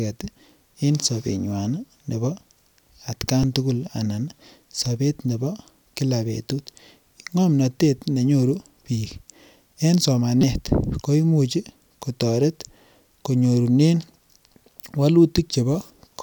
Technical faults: repeated buffer

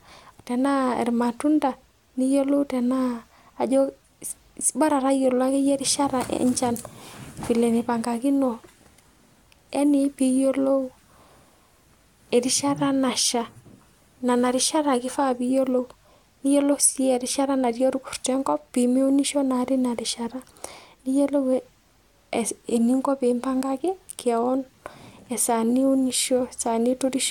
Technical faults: none

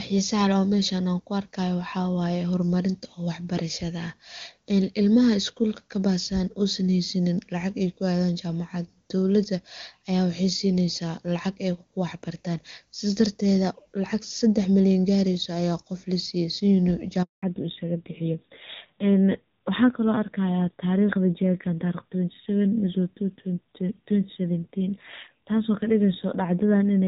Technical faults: handover gap; fallback to narrowband

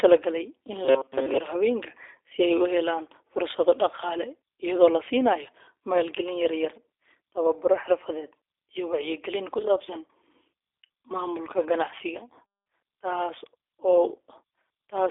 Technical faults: G.729 codec

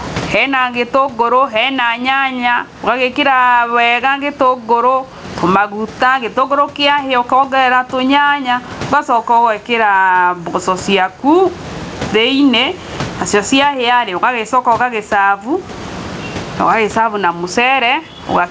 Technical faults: gain pumping

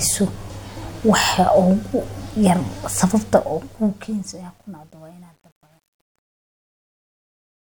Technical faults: truncation distortion on a fade

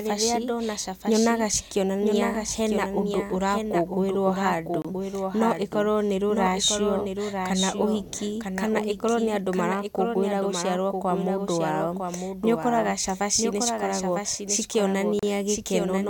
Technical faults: doubled audio track; Bluetooth stall

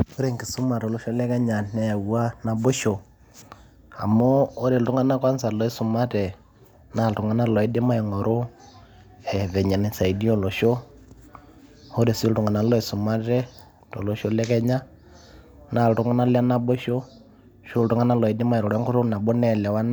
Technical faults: none

